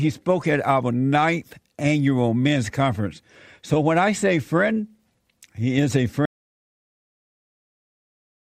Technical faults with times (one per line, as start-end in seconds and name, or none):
6.25-8.58 audio dropout to silence